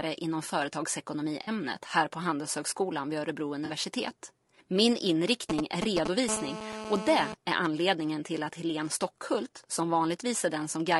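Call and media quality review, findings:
Whole clip: rough, grainy speech with noise filling the gaps between harmonics and a thin, synthetic-sounding top band. The likely cause is low-delay AAC compression (AAC-ELD) at a low bitrate, around 32 kbps. The short frames resolve pitch harmonics poorly. Unlike loss concealment, the damage is constant rather than confined to patches.

1.43 s, just before "här på", and again at 3.65 s: AAC frame loss with concealment. Each is a smeared, phasey gap of about 40 ms, which fits two lost frames. The decoder rebuilt the audio from the last good spectrum. These are brief dropouts that don't fade to silence, distinct from the steady codec grain.

5.50–6.07 s: GSM signalling bursts. A galloping dit-dit-dit pattern of short 217 Hz buzzes, at about the level of the speech. A nearby 2G phone was signalling, and its radio bursts were rectified in the audio circuit. 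It is intermittent, unlike the continuous buzz that follows.

6.29–7.34 s, ending just before "är anledningen till att": GSM phone buzz. A hard, raspy 217 Hz buzz rich in harmonics, about 7 dB below the speech and unrelated to it. A 2G phone in a call transmits in bursts 217 times a second without pause, so the buzz holds steady rather than galloping in bursts.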